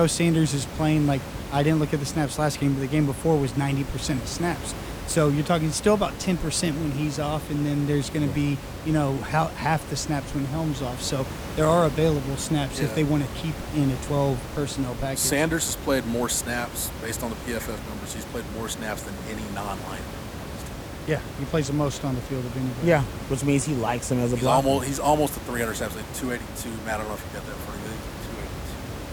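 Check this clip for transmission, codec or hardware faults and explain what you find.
No transmission, codec or hardware faults turn up in this clip, and the room noise sitting about 10 dB below the speech belongs to the recording itself.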